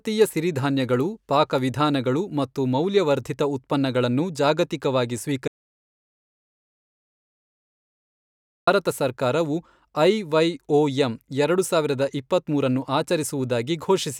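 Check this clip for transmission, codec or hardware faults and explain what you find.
One fault stands out: an audio dropout to silence from 5.48 to 8.67 s, erasing about 3.2 s of speech. The speech stops mid-flow and resumes just as abruptly. The likely cause is lost input, such as a disconnected device or stray mute, while recording continued writing zeros. Unlike a natural pause or gated quiet, the gap holds no room tone at all, and what was said meanwhile is simply missing.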